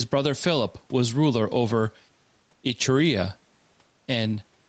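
Throughout the speech the level is pulled down on each loud syllable, swinging by roughly 5 dB, so loud and quiet passages sit squashed together. This is gain pumping, likely from input gain set far too high, with a fast limiter clamping down on each peak. The faint room noise sits about 43 dB below the speech.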